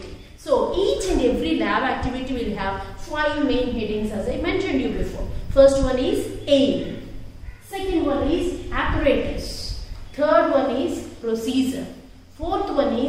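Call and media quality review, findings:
No faults found: the signal path shows no audible technical defects and needs no corrective action.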